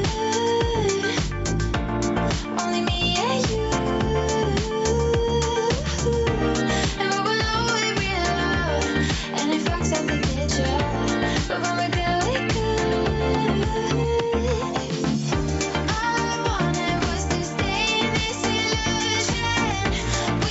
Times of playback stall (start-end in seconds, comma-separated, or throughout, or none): none